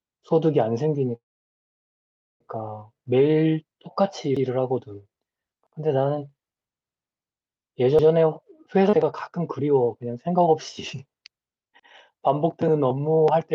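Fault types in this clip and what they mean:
call audio freeze: Packets were likely held up in transit until the jitter buffer ran dry. From 1.15 s to 2.41 s the receiver fills the wait itself: a brief trace of the last sound, then near silence for about 1.2 s. When the packets arrive, the speech resumes exactly where it stopped. Nothing is lost, but a gap of about 1.25 s has been inserted and everything after it runs later.
repeated buffer: Fresh audio did not reach the playback device in time, so it played its last buffer a second time. Each repeat lasts about 93 ms, which fits a 4096-sample buffer. The same short slice of speech plays twice with a hard join, heard as a quick stutter at 4.37 s, 5.67 s, 7.99 s and 11.80 s. No audio is lost; each repeat pushes the following speech slightly later.
skip ahead: A stretch of audio was dropped while later audio was already queued, either in transit or when the jitter buffer discarded data to catch up. 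At 8.9 s playback jumps forward across roughly 0.3 s of speech. The two sides are joined by only a few tens of milliseconds of fill, so the cut sounds abrupt rather than like a pause. The missing material is simply gone, and the delay shrinks by the same amount.
jitter buffer speed-up: The jitter buffer held more audio than its target, so the receiver trimmed it by removing many small pieces, each one or a few pitch periods long. Between 10.94 s and 11.39 s the speech runs at about 111% speed while the pitch stays the same. This phrase sounds briefly hurried. Around 50 ms of audio is taken out in total, reducing the delay by that amount.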